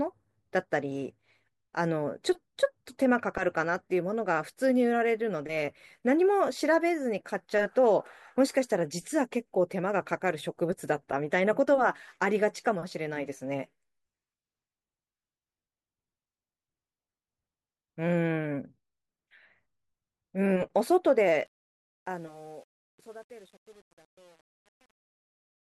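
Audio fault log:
21.46–25.75 s: truncation distortion on a fade. During the speech fade-out, low bits are discarded without dither, consistent with an 8-bit path. From 21.93 s the waveform becomes coarse square steps, and the spectrogram shows gritty broadband hash.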